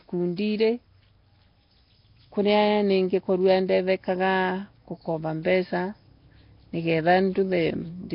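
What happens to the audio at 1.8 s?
At 1.8 s the sound is rough and hissy with a smeared, underwater quality, as it is across the whole clip, pointing to heavy Nellymoser compression as the likely cause. The codec spends a fixed two bits per sample in 256-sample blocks, which fits a rate near 22 kbps, and fills weak bands with noise. A spectrogram shows nothing above 5.3 kHz, blocky time smearing, and patchy noise fill in place of clean harmonics.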